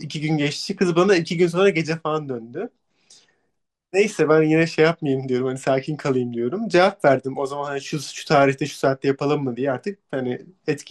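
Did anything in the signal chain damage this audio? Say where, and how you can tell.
Yes: the codec stage, likely MP2 compression at a low rate around 80 kbps, starved upper sub-bands of bits throughout, leaving this speech dull, gurgling and granular.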